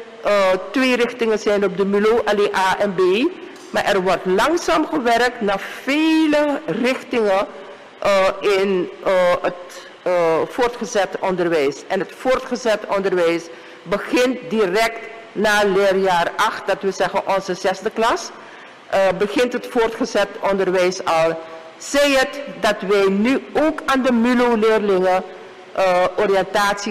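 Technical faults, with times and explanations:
Throughout, hard clipping: the signal is driven about 6 dB beyond what the stage can pass, so roughly 7% of samples are squared off flat at the limit, and those flattened peaks add high harmonics to the loud peaks.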